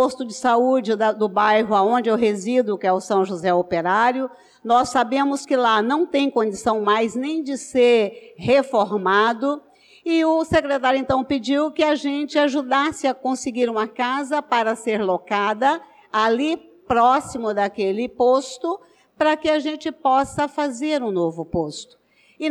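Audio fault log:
No faults are heard in this clip. Nothing in the audio calls for a timed entry in the log.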